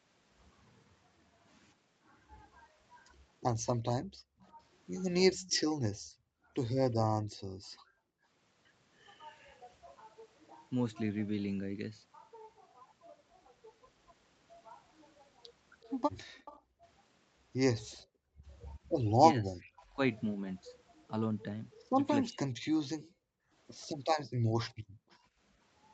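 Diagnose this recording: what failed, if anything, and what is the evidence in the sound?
Background gated by the echo canceller, in call processing, at 4.02–8.25 s, 16.79–16.83 s and 23.0–25.34 s. The room sound dips by about 32, 14 and 37 dB, for roughly a second in the longer spans. While the far end played, the canceller clamped the microphone path.

Echo leak, in call processing, at 4.39–7.67 s, 16.38–19.82 s and 24.69–25.17 s. A faint delayed copy trails the speech by 365, 376 and 382 ms. It sits around 25 dB below the speech, falling to about 35 dB below in the last span. The likely cause is a loudspeaker-side canceller that failed to subtract all of its microphone pickup and returned the residue.

Speech suppressed in double talk, in call processing, at 4.53–7.92 s and 16.44–22.42 s. The talker's speech drops out in short pieces by roughly 40 and 35 dB, adding up to a fraction of a second in the first span and about a second in the second. 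The likely cause is both sides speaking together, so the canceller misread near speech as echo and attenuated it.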